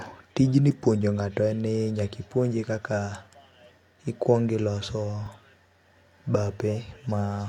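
Faint, evenly spaced ticks run from 0.35 s to 7.42 s, roughly one every 0.3 s: clock slip clicks, likely from two unsynchronised clocks about 70 ppm apart dropping or repeating single samples. At 5.23 to 5.27 s a brief garbled jumble of speech marks chunks out of order, where a 10 ms chunk played three chunks late.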